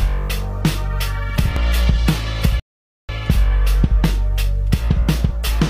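At 1.56 s and again at 4.06 s the sound skips forward by a few milliseconds with no silence. This is audio missing between chunks, likely from a recorder working in 2.5 s blocks. From 2.60 s to 3.09 s a rebuffering stall cuts the sound to silence, then playback resumes exactly where it stopped, adding about 0.49 s.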